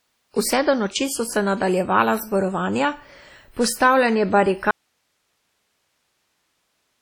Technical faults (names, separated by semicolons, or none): WMA compression; audio dropout to a faint residue